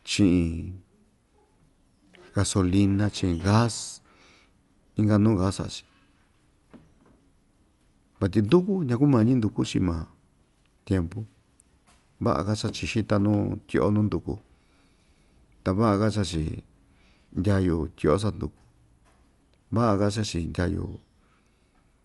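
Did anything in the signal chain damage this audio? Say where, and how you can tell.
Yes, at the codec stage. Throughout, the speech is dull, with nothing above 11.5 kHz and rough, fluttering noise. This is likely Dolby Digital compression at about 64 kbps.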